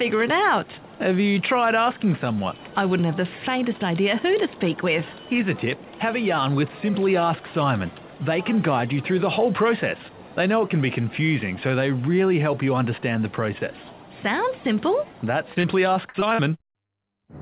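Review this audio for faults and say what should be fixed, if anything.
Repeated packet loss makes the audio choppy and robotic from 15.54 to 16.9 s. Nine short holes, the longest about 42 ms, are each filled by repeating the sound just before, so roughly a sixth of that stretch is patched. On the waveform this looks like copied, periodic-looking cycles. On a spectrogram it shows as smeared, frozen bands, with the band ending near 4 kHz throughout as the call codec's normal limit. A larger jitter buffer, forward error correction and a steadier network link would prevent it.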